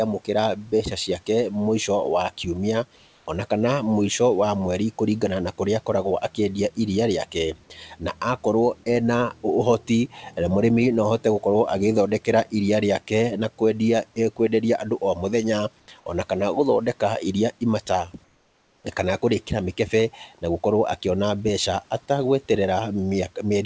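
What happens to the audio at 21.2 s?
Nothing goes wrong at 21.2 s: the speech carries on intact, with only the faint room noise well beneath it and the call path's usual cut-off above 8 kHz.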